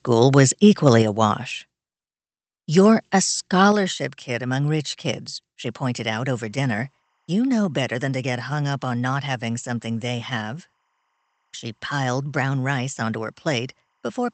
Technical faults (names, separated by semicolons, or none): microphone volume stepped down; timecode bleed